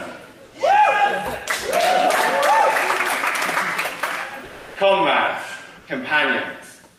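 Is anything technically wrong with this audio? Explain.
Yes. Comfort noise stands in for the background at 0.45–0.53 s, 4.45–4.75 s and 5.79–5.87 s. The real background turns into steady, featureless hiss. It is about 2 dB quieter in the short gaps and about 1 dB louder in the longest. The likely cause is discontinuous transmission: the sender paused during quiet stretches, and the receiver filled them with synthetic noise.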